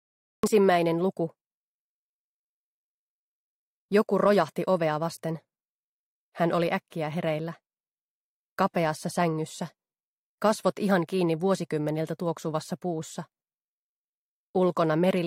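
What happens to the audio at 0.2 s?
At 0.2 s the audio is still in digital silence. This is a cut-off start, running from 0.0 to 0.43 s. Capture began late. The sound then enters abruptly at 0.43 s, mid-sound, with no natural attack or fade-in.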